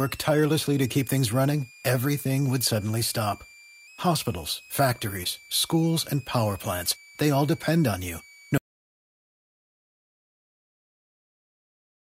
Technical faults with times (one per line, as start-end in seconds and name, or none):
0.00-12.07 switching supply whistle
5.23-5.27 short concealed packet loss
8.58-12.07 audio dropout to silence